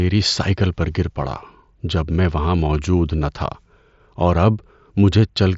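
Nothing goes wrong in this speech clip: it simply sounds like it came through a Bluetooth mSBC headset link, with the top end stopping at about 7.7 kHz as you'd expect from that wideband codec.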